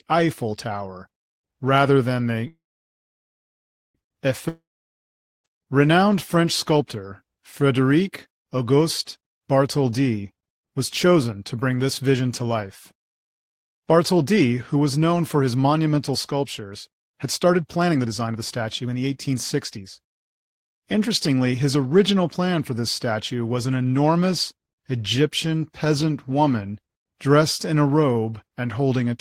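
At 2.47 s, right after "rather than the", the audio stops and a call audio freeze holds it for 1.47 s until 3.97 s. The last sound carries on as a brief fading buzz, then about 1.36 s of silence follows. The packets were most likely delayed and the jitter buffer ran dry. Playback then resumes where it stopped, adding 1.47 s of delay without losing any audio. A waveform shows a flat gap after a short decaying tail. A spectrogram shows a smeared harmonic stripe fading into a blank band.

From 4.48 s to 5.61 s, again following "rather than the", a long network dropout takes out about 0.96 s of audio. As before, there is a short fading continuation of the last sound, followed by roughly 0.82 s of silence. This time the audio returns further along, so the missing stretch is never heard and the sound jumps ahead. The likely cause is a run of packets that never arrived. On a waveform it appears as a near-empty gap. 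On a spectrogram it is a blank column with an abrupt restart on the far side.

From 10.80 s to 22.81 s, ending just before "statue was an enormous", a jitter buffer speed-up plays the audio at about 112% of normal rate with the pitch unchanged, so it sounds hurried. Too much audio had piled up in the buffer, so the receiver repeatedly cut out tiny slices one or a few pitch periods long, about one and a half seconds in total. The spectrogram keeps the same harmonic spacing while syllables sit closer together in time. The waveform shows compressed envelopes.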